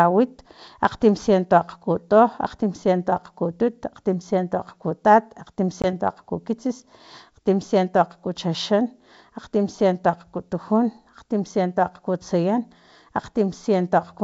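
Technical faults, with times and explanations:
5.82 to 5.86 s, packet loss on an ADPCM call: right after "akgtimsiento akgkutut akgtimsiento akgkutat" about 20 ms of audio drops to a hard-edged silence, which fits a couple of lost packets. The decoder's adaptive predictor and step size then disagree with the sender's, so speech re-enters disturbed before resynchronising.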